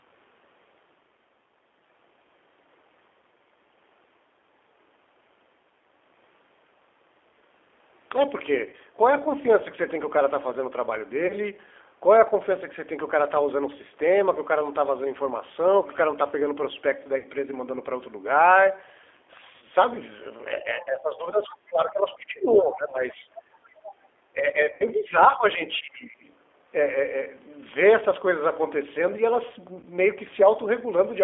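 Throughout the recording the speech is confined to a narrow telephone band of roughly 300 Hz to 3.5 kHz and carries a rough, slightly synthetic texture. That points to a G.729 codec at 8 kbit/s, which rebuilds each short frame from a vocal tract filter, a pitch predictor and a handful of pulses. Simple band-limiting would only sound muffled. This codec also adds a grainy, buzzy roughness, and it is plainly audible here, beneath the normal low-bass cut of the call microphone processing.

At 8.70, 11.27, 17.18, 19.56, 22.90, 24.74 and 29.80 s there is VoIP packet loss concealed by the speech codec. About 30 ms is lost at 8.70, 11.27, 22.90 and 29.80 s, and about 60 ms at the other three. The decoder bridges each hole by extending its last pitch and filter at falling gain. Instead of a silent dropout or a click, you hear a brief stretched, buzzy tone or coloured noise that fades, and the speech sounds weak for a moment after it returns.

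At 20.8 s and 22.19 s, faint scraps of a second talker appear, around 25 dB below the main speech. This is the other side's voice leaking through, likely because the echo canceller left some of the loudspeaker playback in the microphone signal. What separates it from background noise or codec artefacts is that it has its own speech-like rhythm, layered under the talker.

From 24.33 to 26.23 s the speech is suppressed in double talk. The level dips by up to about 15 dB over about a second and a half in total, likely because the echo canceller turned everything down while both sides spoke. The 60 ms concealment at 24.74 s falls inside this stretch. The suppression is far longer and more uneven than that frame-sized gap, and it pumps the level down rather than filling a hole with buzz.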